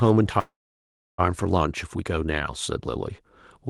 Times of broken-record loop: none

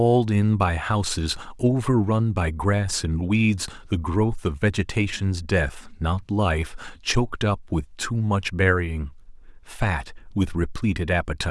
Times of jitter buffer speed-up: none

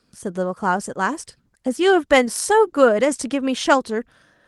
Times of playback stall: none

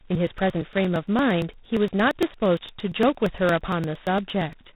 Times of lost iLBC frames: none

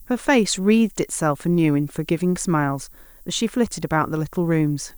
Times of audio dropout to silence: none

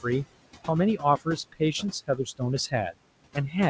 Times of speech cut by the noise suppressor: 1.20-2.41

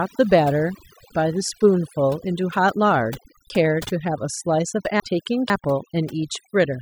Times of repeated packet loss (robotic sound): none

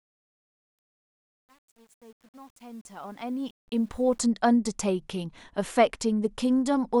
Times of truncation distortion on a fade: 0.00-4.20

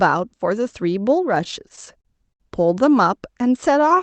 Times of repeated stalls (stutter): 1.35-2.42

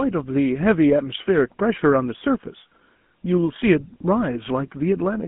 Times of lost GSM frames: 3.60-3.63

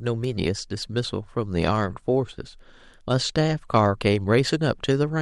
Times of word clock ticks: 0.24-4.94

